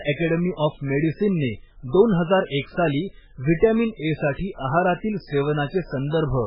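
Throughout, the speech has nothing above about 5.2 kHz and sounds watery and swirly, with smeared attacks, likely from MP3 compression at a very low bitrate zeroing weak frequency lines.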